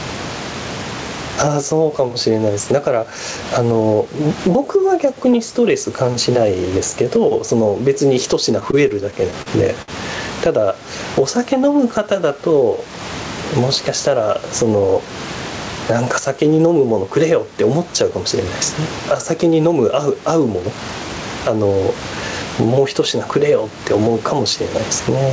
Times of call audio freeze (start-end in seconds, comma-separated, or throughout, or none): none